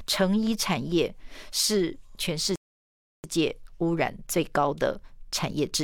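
At 2.56 s the speech stops dead for a rebuffering stall. The player ran dry of data. Silence lasts until 3.24 s, then speech resumes seamlessly, adding 0.68 s.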